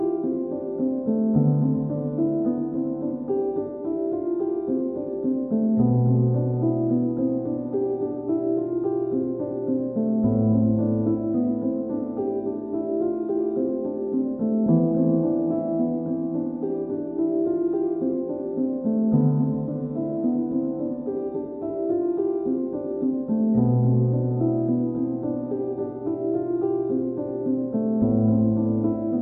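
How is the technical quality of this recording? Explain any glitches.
Nothing here trips up the ear, so there are no glitches to explain and the recording holds together well all the way through.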